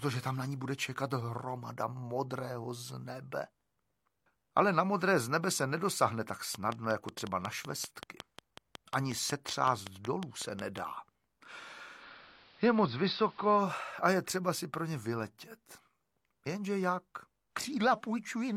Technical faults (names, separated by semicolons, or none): train of clicks; digital radio blending to analogue